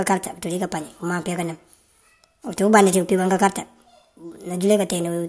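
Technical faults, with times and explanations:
Throughout, wrong sample rate: the speech runs about 1.38 times too fast and sits roughly 5.5 semitones high, so voices sound hurried and thin, with a chipmunk-like edge. Tempo and pitch rise by the same ratio because the samples are read out faster than they were captured, with no resampling. The ratio fits audio recorded at 16 kHz being played back at 22 kHz.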